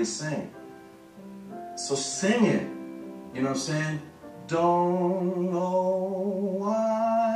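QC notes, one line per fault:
Nothing to flag here; I didn't hear any problems anywhere in this one.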